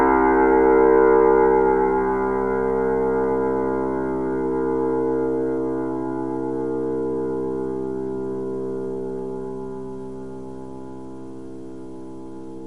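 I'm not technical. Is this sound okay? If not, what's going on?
Yes, nothing wrong with this recording of sounds: no dropouts, glitches or distortion at any point.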